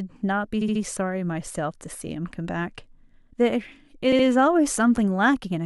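Speech that stutters at 0.61–0.82 s, 2.07–2.09 s and 4.11–4.25 s, replaying brief slices about 70 ms, 23 ms and 70 ms long. These are repeated frames: compressed blocks decoded more than once, each adding its replay time.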